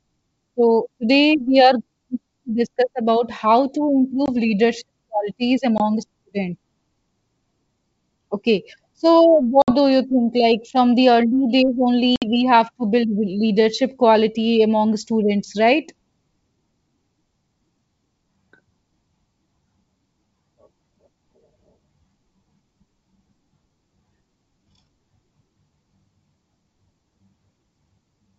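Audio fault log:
4.26–4.30, 5.78–5.80, 9.62–9.71, 12.16–12.26 s: packet loss on an ADPCM call. Silent gaps of 20, 20, 60 and 60 ms fit one or three lost packets. The decoder's predictor then drifts, so sound resumes slightly distorted.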